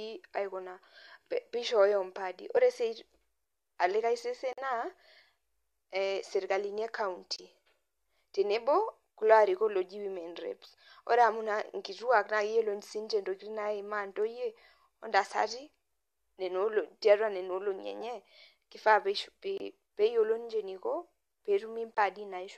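Speech with a corrupt frame decoded at 2.57 s, just after "peishooyo impaadi": one damaged frame played anyway gives a brief glitch of misplaced energy peaking around -25 dBFS rather than silence. Corrupt frames muted leave abrupt silent holes at 4.53–4.59 s after "olikae sesen", 7.33–7.40 s after "ee serkalini e", 19.58–19.61 s and 21.95–21.98 s. The decoder rejected the damaged frames, so the gaps drop out and timing stays intact.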